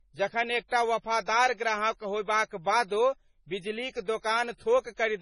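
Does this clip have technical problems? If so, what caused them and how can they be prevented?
Yes. Heavy MP3 compression damage runs through the whole speech clip, likely from encoding at a very low bitrate. Nothing remains above 10.5 kHz, where the encoder cut the treble. Weak frequency lines flicker between frames, giving a watery, swirly texture. The damage fits a bitrate near 24 kbps. To prevent it, encode at 128 kbps or higher, or keep an uncompressed master.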